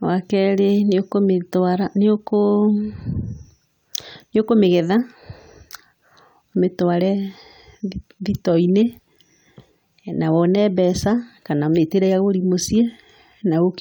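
No technical faults are audible anywhere in the speech recording.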